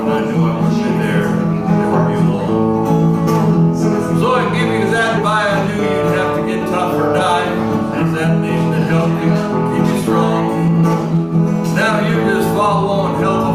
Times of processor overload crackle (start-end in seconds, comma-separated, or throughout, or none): none